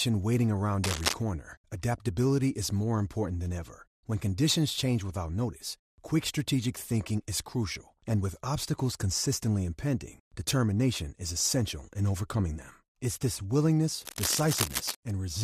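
Throughout the speech, MP2 compression dulls the sound with gurgling, granular distortion, likely from a low bitrate around 80 kbps; a spectrogram shows upper sub-bands flickering on and off. Cable scratch noise, likely from a worn contact being moved, adds dense rustling bursts from 0.84 to 1.15 s at about speech level before "adaptability is more important", and from 14.01 to 14.95 s slightly quieter. These show as ragged broadband smears.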